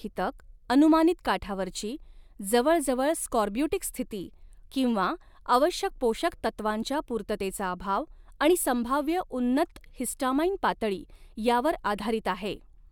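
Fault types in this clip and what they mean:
No faults detected; the speech track shows no audible defects.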